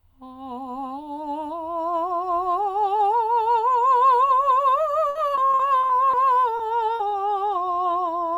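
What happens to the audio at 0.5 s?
Nothing goes wrong at 0.5 s; the music plays through that moment intact, with no dropout, click or other fault.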